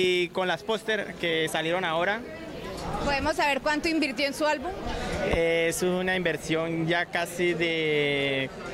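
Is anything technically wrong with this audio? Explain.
Yes. DECT cordless phone buzz runs throughout: a nearby handset's radio bursts, 100 times a second, get rectified by the audio circuitry, leaving a faint, thin 100 Hz buzz rich in harmonics.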